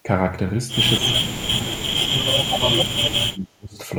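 From 0.97 to 1.88 s the speech sinks sharply, by around 35 dB at its deepest, and from 2.15 to 3.77 s it drops again, by around 40 dB. This is speech suppressed in double talk. It was likely caused by the far side talking at the same time, so that the echo canceller mistook the near talker for loudspeaker echo and turned both down.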